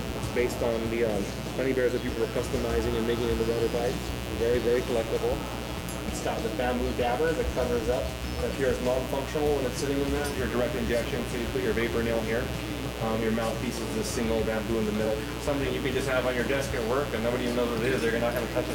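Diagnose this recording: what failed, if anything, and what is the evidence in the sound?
A steady, raspy buzz runs under the whole recording, from the first second to the end, sitting only about 10 dB below the wanted sound, so it is prominent throughout. This is mains buzz entering at the analogue wiring stage. Its fundamental is 60 Hz, but the harsh edge comes from sharp switching spikes, from a dimmer, a rectifier or a missing shield, that occur twice per mains cycle and spread harmonics up into the kilohertz range.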